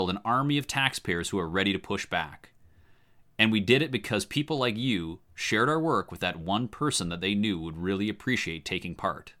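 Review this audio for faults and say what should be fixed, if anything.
Sample clock jitter runs from 5.94 to 8.55 s, just after "like you shared our". The converter's clock wavers by roughly a microsecond, so each sample lands slightly off time; on steep, bright parts of the speech this adds a rough hiss about 40 dB below the signal. To prevent it, clock the converter from a stable, low-jitter reference.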